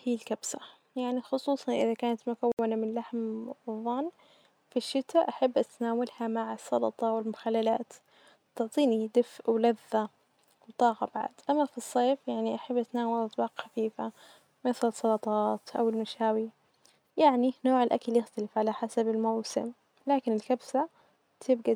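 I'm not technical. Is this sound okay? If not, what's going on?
No. A Bluetooth stall, likely caused by wireless interference holding up the data, left the headphones with nothing to play. After "يعني خصوصا إذا كانت", the speech goes silent from 2.52 to 2.59 s and then carries on.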